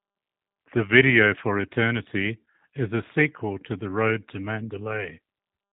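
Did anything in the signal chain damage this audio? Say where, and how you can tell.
Yes: the G.729 codec stage damages the speech throughout, sounding rough and synthetic, consistent with 8 kbit/s coding. A spectrogram shows nothing above 3.8 kHz, with a hard, flat ceiling.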